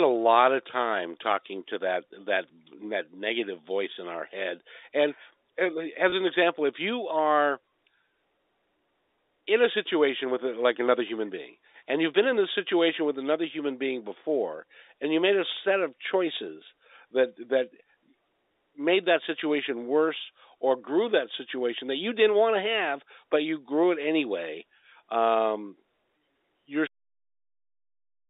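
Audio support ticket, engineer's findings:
Packet loss with pitch repetition, 6.10 to 6.12 s: brief held, slightly buzzy blip. A 20 ms gap was bridged by repeating the last pitch period, which fits a single dropped packet on the receive side.

Cut-off end at 26.87 s: audio stops mid-sound and drops straight to digital silence, no decay. The final buffers were never written or played out, likely a recorder or playback shutdown issue.

The narrowband telephone sound comes from the G.711 A-law coding, with the line band at roughly 300 Hz to 3.7 kHz.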